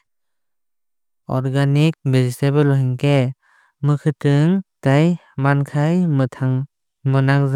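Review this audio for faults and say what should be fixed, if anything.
Nothing here needs fixing, since no technical fault can be heard anywhere in the speech. There is no action to take and nothing to prevent.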